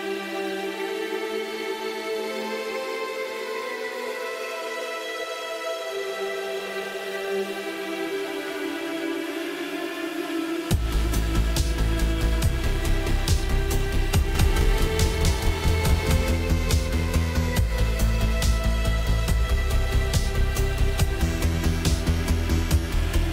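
From 14.35 to 16.31 s, a doubled audio track appears. A second, equally loud copy trails the original by about 300 ms. It carries no room tail and starts and stops abruptly. A slower second capture path is the likely cause.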